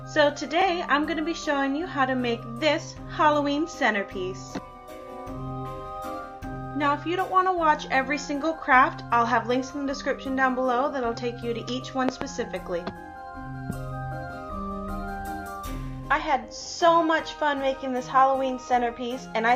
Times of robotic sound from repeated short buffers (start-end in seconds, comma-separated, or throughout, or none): none